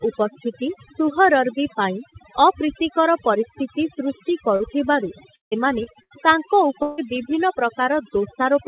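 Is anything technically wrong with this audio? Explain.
Yes, there are several problems. Throughout, there's overdone noise removal: the denoiser is clamping bands near its noise estimate, so the background goes to twinkly near-silence.

There are two short concealed packet losses, at 4.56 s right after "ପରିସ୍ଥିତି ସୃଷ୍ଟି" and at 5.83 s. Each lost about 40 ms that the receiver patched by extending the last sound, leaving a brief smear or wobble.

At 6.03 s, a burst of packet loss drops about 80 ms. The concealment holds the previous sound as a fading buzz or hiss before the speech picks up further on.

At 5.36 s and 6.82 s, there are longer gaps, most likely a network dropout, each losing about 0.16 s. The first smears into a held sound, then goes quiet for a good stretch before the speech resumes. The second is a continuous concealed smear with no silent gap.

Nothing is heard above 4 kHz, which points to a narrowband call codec such as G.711.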